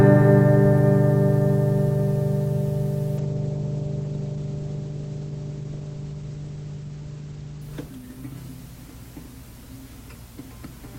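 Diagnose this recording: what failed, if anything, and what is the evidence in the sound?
A call bitrate drop at the codec stage from 3.19 s to 8.93 s: the sound turns coarse and muffled, with the top end cut from 20 kHz to 8 kHz for about 4.2 s, which fits the encoder falling from 32 kbps to 11 kbps after the bandwidth estimate dropped.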